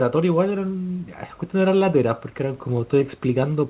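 No technical faults can be heard in this speech recording. The sound comes through a call path whose band stops at 4 kHz, which fits a narrowband telephone codec such as G.711 A-law, with quiet room noise about 35 dB below the speech.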